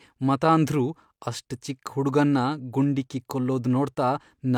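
A short speech recording with nothing technically wrong with it.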